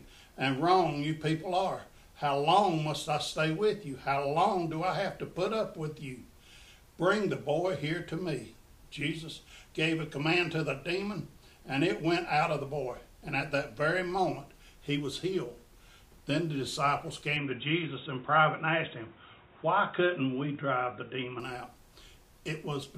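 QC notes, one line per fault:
17.37 to 21.40 s, input switched to a poorer device: the sound suddenly goes dull and boxy with nothing above 3.8 kHz, a new background hiss sits well under it, and the level holds steady with no gap. It's likely a switch to a narrower-band mic or headset profile.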